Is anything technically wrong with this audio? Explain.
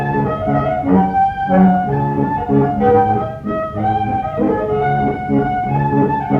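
No, nothing technically wrong is audible anywhere in this audio.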